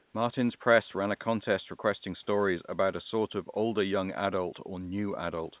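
Right at the start, from 0.00 to 0.14 s, the room background gives way to comfort noise in place of the background: a flat, featureless hiss about 1 dB quieter, sitting roughly 43 dB below the loud parts, likely because the sender's voice detector paused transmission and the receiver filled the gap with synthetic noise. The call path's band limit cuts everything above 4 kHz.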